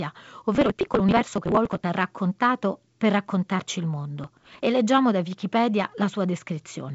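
From 0.55 to 1.84 s, and again from 4.24 to 4.63 s, processor overload crackle tears through the speech. The processor misses buffer deadlines, each buffer around 10 ms, over and over. Each late buffer is skipped, leaving a hard-edged gap. Together the gaps sound like gritty crackling.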